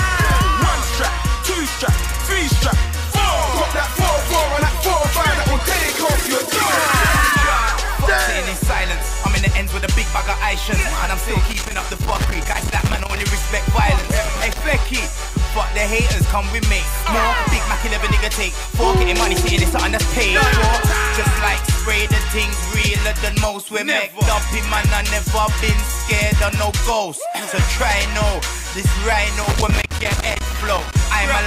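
Loose connector crackle appears from 11.47 to 13.24 s, again from 13.98 to 14.61 s, and from 29.42 to 30.96 s. A worn or dirty contact keeps making and breaking, chopping the audio into irregular bursts of scratchy crackle.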